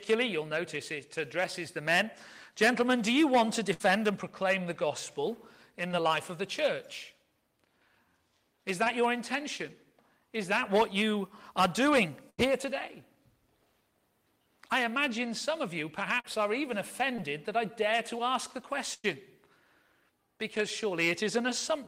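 At 3.73 to 3.82 s the sound sticks briefly: the last moment is drawn out and fades for about 62 ms, then the audio jumps ahead, with roughly 60 ms of material gone. This is a burst of packet loss. Several consecutive packets never arrived in time, so the receiver extended and attenuated what it last had before resuming later in the stream.

At 5.88 to 5.92 s a brief smear or wobble of about 22 ms replaces 20 ms of audio. This is short concealed packet loss, where the decoder patches a small gap with a continuation of the preceding sound and blends back in.

The same brief blur recurs at 8.84 to 8.88 s, where about 18 ms fills a 20 ms hole.

At 12.30 to 12.40 s there is a longer burst of packet loss. A held, fading tail lasts about 85 ms before the audio picks up again, with roughly 80 ms lost.

Short concealed packet loss returns at 16.20 to 16.26 s. This is the longest of the short gaps, a smear of about 38 ms covering 40 ms of missing audio.

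At 17.16 to 17.20 s there is another quick patch, about 17 ms over a 20 ms gap.

At 18.94 to 19.06 s comes the largest burst of packet loss. The concealment stretches and fades the last sound for about 101 ms and ends in around 10 ms of silence. The audio then resumes with roughly 100 ms skipped.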